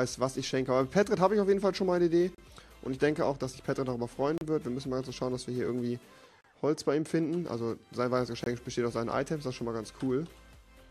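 Mistimed segment boundaries in a stream leave gaps between stream segments, which the player pads with silence: hard-edged dropouts of about 34 ms at 2.35, 4.38 and 6.41 s, and about 23 ms at 8.44 s, recurring every 2 seconds without losing any audio.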